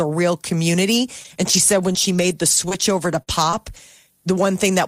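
Speech with scattered short gaps from 1.23 to 3.78 s, just after "real community": around seven brief dropouts, the longest about 40 ms, each patched by extending the preceding sound, leaving small ticks and smeared hiccups where lost or late packets were concealed.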